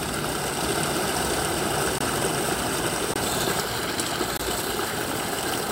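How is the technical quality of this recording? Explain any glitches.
The recording has two distinct faults: a doubled track from 0.62 s to 3.60 s and three short dropouts to digital silence.

From 0.62 s to 3.60 s there is a doubled audio track. A second, full-band copy of these sounds runs roughly 0.7 s behind the first, at about the same level. The likely cause is the signal being captured a second time through a slower path and mixed back in. The copy carries no decay or room colouring, so it reads as a hard, flat repeat. It enters and drops out abruptly at both ends of that span.

There are three blocks of digital silence, each about 21 ms long: 1.98–2.01 s, 3.14–3.16 s and 4.37–4.40 s. In each, the audio cuts straight to silence and back with no fade, leaving a brief hole. The identical length fits a 1024-sample buffer that the program did not fill in time.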